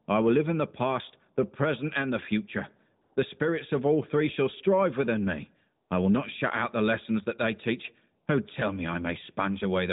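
Speech carried over an AMR narrowband mobile link, with nothing above 4 kHz and light codec colouring. AMR comfort noise appears twice. The sender judged these moments silent and stopped sending speech. The receiver then filled the gap with smooth synthetic noise. After "present and the future", from 3.02 to 3.16 s, 140 ms of real background is swapped for this steady hiss. From 5.88 to 5.90 s, between "shall strive within me" and "I will not shut", a 20 ms patch is replaced the same way.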